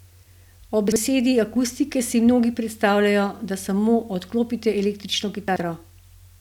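Around 0.88 to 0.96 s there's a quick jumbled stutter: chunks out of order, a 40 ms block landing one slot late. It happens again at 5.48 to 5.6 s, two slots late. Nothing's missing, just shuffled, with hard joins.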